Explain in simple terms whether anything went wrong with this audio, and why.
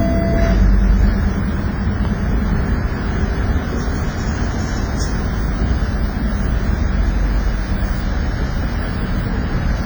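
The recording was likely squeezed hard by WMA compression, which stores sound in blocks and discards faint detail. Across the whole clip, from start to about 10 seconds, that leaves a ringing, washy quality and a hiss that swells and fades with the sound.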